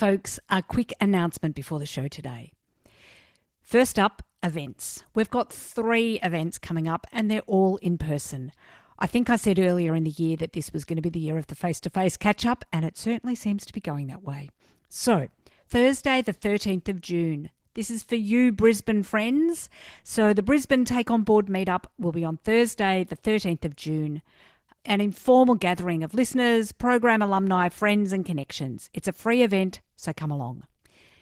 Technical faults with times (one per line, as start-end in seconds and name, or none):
0.00-31.22 Opus voice compression